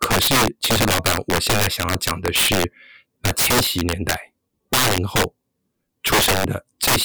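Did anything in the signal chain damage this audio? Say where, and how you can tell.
Yes. Integer overflow runs through the whole speech clip: every loud peak produces a violent crack rather than the softer flattening of clipping. The gain was pushed about 13 dB too hot at a sample-format conversion or integer gain stage, and values past the largest integer wrapped to the opposite sign instead of saturating. Around one sample in twenty exceeds the limit, and each one jumps across the full range, which explains the harsh, explosive texture on louder syllables.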